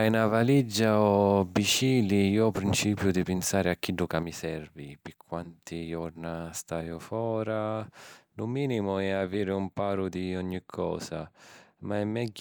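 At 2.56 s, lasting until 2.58 s, a single loud pop lands just before "principiu di pinsari a". A sudden voltage pulse, likely from a plug, switch or static discharge, was added on top of the speech, and the following circuitry shaped it into a brief sharp thump that peaks a few decibels above the voice. The speech continues underneath. On a waveform it is a narrow spike standing clear of the surrounding envelope; a spectrogram shows a thin vertical stripe spanning the full frequency range.

From 4.23 s, right after "pinsari a chiddu ca", one channel drops out and stays lost to the end of the clip. With only one side feeding the mono sum, the speech common to both channels falls abruptly by about 6 dB. The likely cause is a failed connection or dropped input on one stereo side. The waveform shows a clean step down to roughly half amplitude at that instant. On a spectrogram the whole band dims uniformly from that point, with no change in spectral shape.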